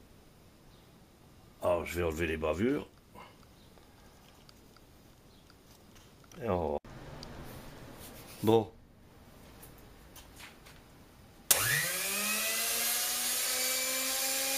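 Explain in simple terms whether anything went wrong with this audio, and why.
Nothing went wrong here; you can listen all the way through without hearing any glitches, dropouts or odd noises.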